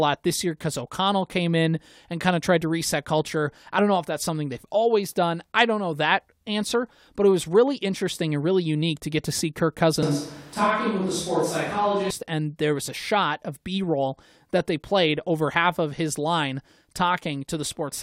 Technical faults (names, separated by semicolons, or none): switch to a distant microphone